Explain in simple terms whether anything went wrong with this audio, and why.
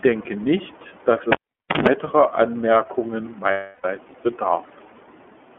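The whole recording sounds thin, muffled and slightly robotic. That is the iLBC codec, a phone-call compressor that keeps only about 250 Hz to 3.4 kHz and rebuilds the speech in 30 ms chunks.

From 1.32 to 1.88 s there is a pop, about half a second of near silence, a short 50 Hz mains buzz, then another pop. That is a cable pulled and plugged in: the connection broke, and the plug's tip hummed briefly as it went back in.

From 3.51 to 3.85 s the speech turns into a held, buzzy smear for about a third of a second. Those are lost iLBC frames: data went missing, so the decoder kept repeating the last sound. The gap fits about eleven lost 30 ms chunks.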